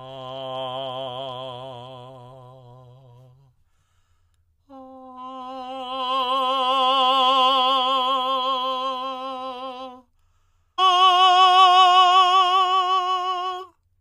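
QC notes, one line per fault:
10.78 s, stream segment skipped: the music jumps forward abruptly with a tiny blip, resuming somewhere later. That's likely one chunk of the segmented stream failing to load, so the player simply carried on with the next one.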